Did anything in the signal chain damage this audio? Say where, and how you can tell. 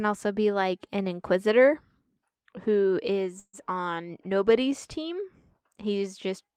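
Yes. From 3.39 to 3.55 s the speech stops moving forward. The last sound is stretched into a short buzz or hiss that fades, drops to near-silence for about 50 ms, and then the speech picks up exactly where it left off with nothing skipped. That is a call audio freeze at the network stage, likely from packets held up in transit until the jitter buffer ran dry. About 140 ms of filler was inserted, so everything after it plays that much later.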